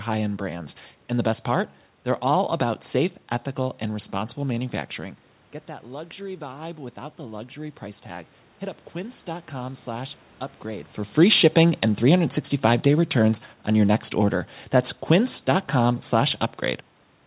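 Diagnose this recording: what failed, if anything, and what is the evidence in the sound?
Automatic gain rising in the call processing: after the talker moved back near 5 s and the level dropped about 14 dB, the gain climbed about 4 dB from 5.83 to 8.37 s, swelling voice and room noise together.

Automatic gain falling, also in call processing: after the talker moved near 11 s, gain eased down about 3 dB from 11.21 to 14.41 s, so speech and background sink together.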